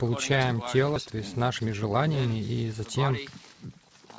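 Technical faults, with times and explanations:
0.96–0.98 s, skip ahead: playback jumps forward with no fill, so roughly 0.7 s of sound never plays. The two sides are butted together almost directly. This fits a jitter buffer discarding queued audio on overflow, cutting the delay by about that much.
1.59–2.17 s, jitter buffer speed-up: the sound runs about 9% fast at unchanged pitch and feels hurried. The buffer was holding more audio than its target and trimmed short pitch-period pieces repeatedly, around 70 ms in total, through the G.722 call path.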